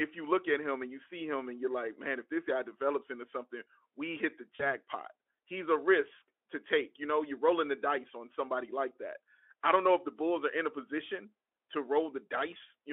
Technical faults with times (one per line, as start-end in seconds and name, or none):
4.55-4.64 VoIP packet loss concealed by the speech codec